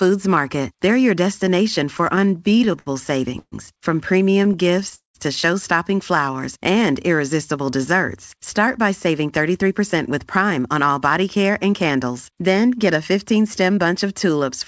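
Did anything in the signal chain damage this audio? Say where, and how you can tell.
Yes, and all of it happens at the network and jitter-buffer stage of a call path. The G.722 coding, with nothing above 8 kHz, is simply the codec's normal band limit.

Repeated stalls (stutter) appear twice. Right after "your destination", from 1.98 to 2.88 s, the sound catches 11 times, with 172 ms filled in total and the longest gap 68 ms. From 4.32 to 5.16 s there are 8 catches totalling 248 ms, the longest 194 ms. Each gap is padded by continuing the last sound while packets trickle in late, so nothing is lost. The many separate hiccups distinguish this from a single freeze.

A call audio freeze sits at 3.39 to 3.54 s. The sound is held on for 130 ms, fading to about 50 ms of silence, then resumes exactly where it stopped with nothing missing. A network hold-up that emptied the jitter buffer is the likely cause. 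It is one continuous hold rather than a string of catches.

A jitter buffer slow-down runs from 6.21 to 6.91 s, just before "irresistible desserts". Speech drags to about 92% speed, with 65 ms added, while pitch stays put. The receiver repeated pitch periods to rebuild its reserve. The stretch is smooth and gapless, which separates it from a stall.

A jitter buffer speed-up covers 8.79 to 13.78 s. Speech hurries at 107% speed, with around 300 ms trimmed away, yet pitch is unchanged. The buffer was shedding excess delay by cutting short pitch-period slices. Because the pitch stays level, this is time compression and not a playback-rate or clock error.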